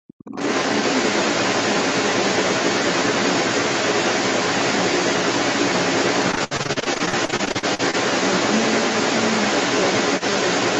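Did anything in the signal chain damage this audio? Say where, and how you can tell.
Yes. In the opening 0.00 to 0.33 s the talker's speech dips sharply, by about 40 dB at its deepest, for roughly a third of a second. This is speech suppressed in double talk, likely from the call's echo canceller ducking everything while both sides spoke at once.

From 0.26 s to the end, a second voice runs under the talker at a level roughly 5 dB above the talker's speech. This is the other side's voice leaking through, likely loudspeaker echo that the call processing's echo canceller failed to subtract from the microphone signal.

Between 6.31 and 7.95 s the sound turns choppy and robotic, with about two dozen short holes, the longest 69 ms, patched over roughly a third of that span. This is repeated packet loss on the network, with the jitter buffer extending the last audio into each gap.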